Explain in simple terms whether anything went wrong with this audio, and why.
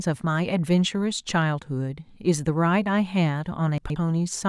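Near the end, from about 3.78 to 3.96 s, there's a short jumbled blip. That's chunks out of order: one 60 ms slice of the speech arrived two slices late, so it plays after the bits that should follow it. Nothing's missing, just shuffled.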